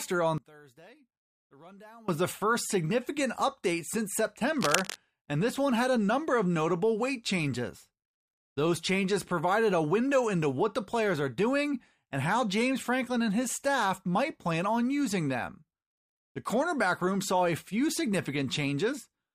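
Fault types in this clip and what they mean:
one channel inverted: From 0.38 to 2.08 s, the speech drops by about 24 dB and turns faint. Full level returns just before "the first significant update". The likely cause is one stereo channel with reversed polarity. When the two channels are summed to mono, everything common to both cancels. Centred speech nearly vanishes. Only the small difference between the channels survives, which sounds like a weak copy.
cable scratch noise: From 4.56 to 4.97 s, dense, uneven bursts of scratching and rustling sit over the speech. They are nearly as loud as the speech itself. This falls between "first significant update since" and "and this one had". The likely cause is a worn cable, connector or control being moved. Its contact resistance jumps rapidly, and each jump injects a burst of noise into the signal.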